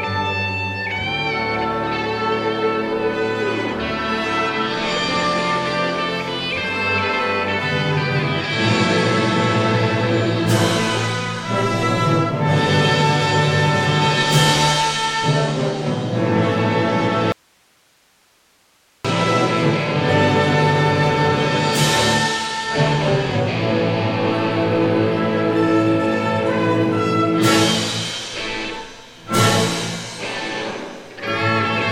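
At 17.32 s the wanted signal is likely lost somewhere upstream while the path after the break stays live, giving an audio dropout to a faint residue. For about 1.72 s, until 19.05 s, the sound cuts out abruptly in mid-flow and only a bed of hiss remains, roughly 40 dB below the normal level. It then snaps straight back rather than fading, so the gap reads as a break in the chain, not a natural pause.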